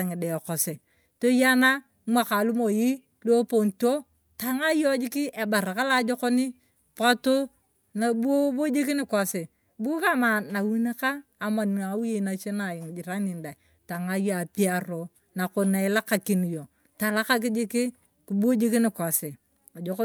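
A recording of speech, with no technical fault to be heard anywhere in it. There is nothing to place in time and no cause to explain.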